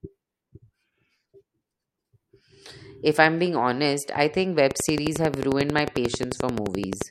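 Something, likely interference from nearby equipment or a faulty connection or power supply, starts injecting a pulse into the signal at 4.71 s, just after "being honest I think", and keeps it up until 7.03 s. The result is a train of clicks: about 11.3 per second at a steady, regular spacing, around thirty in all, each standing roughly 15 dB above the speech. They are heard as a fast mechanical ticking laid over the talking and through the pauses.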